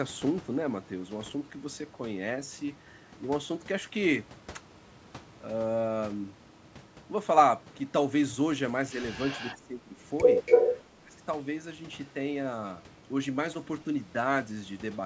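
From 9.18 to 9.56 s an echo leak adds a faint copy of the far-end speech about 279 ms late, roughly 20 dB down. The likely cause is a speakerphone whose echo canceller let some loudspeaker pickup through. On a spectrogram it appears as weak harmonic traces offset from the main speech. At 10.46 to 10.82 s the same 279 ms echo returns, now about 5 dB louder than the speech, as a strong doubled pattern.

Speech suppressed in double talk follows each echo, at 9.58 to 9.98 s (drop near 15 dB) and 10.96 to 11.18 s (near 25 dB). The canceller, likely unable to separate talker from echo, turned both down. In the waveform the envelope sags, and the spectrogram thins and darkens.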